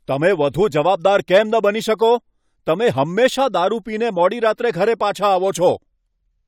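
No technical faults turn up anywhere in this speech recording, so there is nothing to describe in time order.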